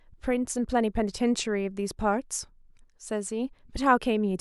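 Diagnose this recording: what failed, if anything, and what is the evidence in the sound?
Nothing failed: no stage of the recording leaves any fault to be heard in the sound.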